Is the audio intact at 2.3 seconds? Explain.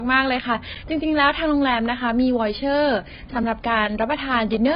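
No. Low-bitrate audio saved at a high bitrate runs throughout. Nothing sounds above 5.1 kHz, and the dull, smeared sound likely comes from a very low-bitrate encoding that the later high-bitrate MP3 cannot restore.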